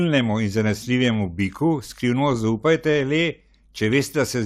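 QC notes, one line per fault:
3.84–3.99 s, DAB burbling: for about 0.15 s the speech picks up short blips of noise. Weak reception has let a residual bit error rate of about 0.07 percent slip past error correction into the MP2 data. Corrupted samples put short noise blips in single sub-bands, and corrupted scale factors make sub-bands jump in level for up to a frame. On a spectrogram this appears as blocky, isolated bright rectangles in separate frequency bands.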